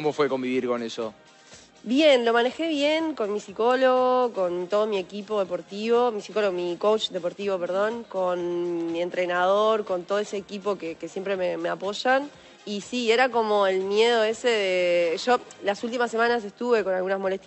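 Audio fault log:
No faults heard.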